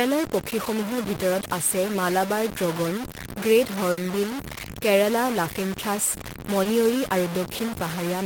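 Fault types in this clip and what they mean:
Low bit depth without dither: the speech was likely truncated to about 4 bits with no dither, leaving grainy distortion only about 10 dB below the voice throughout.
Burst of packet loss: roughly 60 ms of packets never arrived near 3.91 s, so the receiver stretched the last sound as a fading fill, then skipped ahead.
Short concealed packet loss: about 20 ms of audio was lost near 6.63 s; the decoder patched it by extending the preceding sound, leaving a brief smear.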